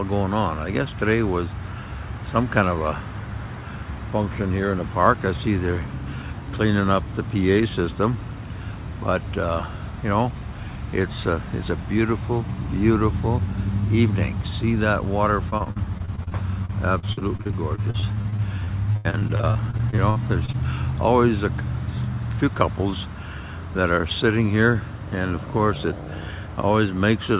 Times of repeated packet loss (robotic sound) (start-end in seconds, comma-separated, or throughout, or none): 15.50-20.55